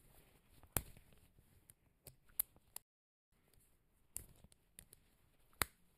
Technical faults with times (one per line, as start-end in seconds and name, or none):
0.00-5.98 channel delay (comb filtering)
2.82-3.32 playback stall